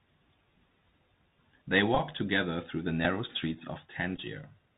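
Speech heard through a Bluetooth headset link using the Bluetooth CVSD headset codec. Its damage is plainly audible from start to finish. The sound is narrowband, with nothing above 4 kHz. CVSD sends one bit per step, up or down, and adapts the step size. Loud, bright sounds change faster than the step can follow, so they distort. S sounds come out scratchy. A granular hiss sits under the speech throughout.

There are also three Bluetooth headset packet repeats. In each, voice packets were lost and the last good one was decoded again. From 1.95 to 2.00 s, about 22.5 ms is lost, spread over 45 ms. The longest run is roughly 15 ms, long enough for a brief buzz near 267 Hz, set by the 3.75 ms repeat period. At 3.05 s a single 3.8 ms repeat gives only a small tick. From 4.16 to 4.19 s, 11.2 ms is lost, giving a very short buzz.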